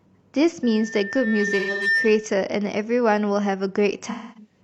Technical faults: loudspeaker feedback squeal; AAC frame loss with concealment

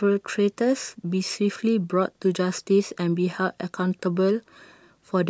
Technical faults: none

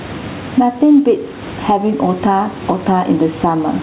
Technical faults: gain pumping

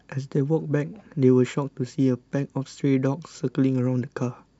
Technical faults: none

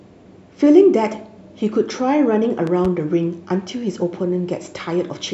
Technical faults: loud pop

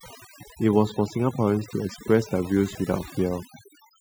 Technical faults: overdone noise removal

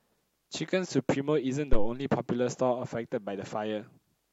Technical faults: phantom power thump

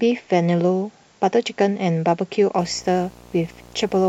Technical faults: video or display buzz

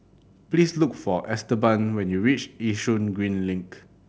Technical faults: none

